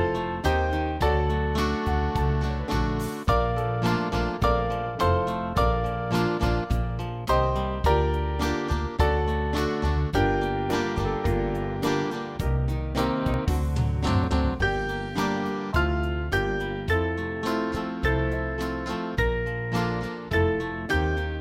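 Jumps ahead at 2.68, 10.7, 13.34 s (longest, around 70 ms lost) and 14.24 s, likely a dropped buffer (overrun). Each appears as a thin vertical spectrogram streak and a waveform discontinuity.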